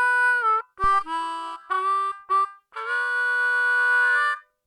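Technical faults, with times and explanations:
0.84 to 1.16 s, phantom power thump: a supply voltage was switched on or off on a live input, and its sudden DC step passed through the coupling capacitors, producing a deep low-frequency thump that peaks at about -19 dBFS and decays over 73 ms.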